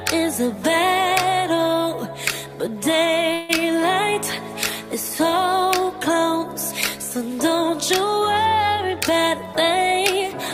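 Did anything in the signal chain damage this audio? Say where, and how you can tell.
Yes. At 3.33 to 3.51 s there's a call audio freeze: the last bit of sound stretches into a fading buzz for about 156 ms, then the audio picks up exactly where it stopped with nothing lost. That's likely network packets held up long enough to drain the jitter buffer.

Then from 8.96 to 10.33 s you get a jitter buffer speed-up. The audio runs at about 107% speed with unchanged pitch, so it sounds a touch hurried. The receiver is trimming tiny pitch-period chunks, about a tenth of a second in total, to work off the extra audio held in the buffer.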